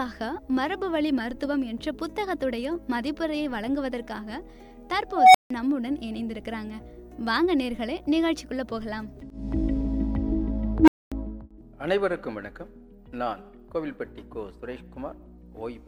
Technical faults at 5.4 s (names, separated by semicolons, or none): unstable filter